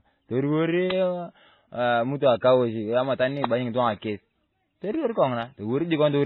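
Speech, cut hard at 4 kHz (a flat ceiling on a spectrogram) with stacked smearing and warble throughout, points to transcoding between lossy codecs, likely low-rate MP3 then AAC.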